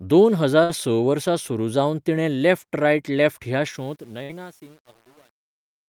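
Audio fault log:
0.63 to 0.72 s and 4.23 to 4.32 s, burst of packet loss: each time the last sound is held and fades out before jumping ahead. About 60 ms was filled by continuing the last sound, about 40 ms was simply skipped, and playback timing moved by roughly 20 ms.
3.69 s to the end, truncation distortion on a fade: the fade-out, starting around 3.69 s, turns gritty, worst from 3.94 s onward. The fade stage kept only 8 bits without dither, so the quiet tail collapses into coarse square steps.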